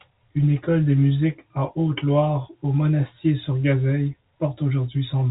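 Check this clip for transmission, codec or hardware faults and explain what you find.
No transmission, codec or hardware faults are audible here.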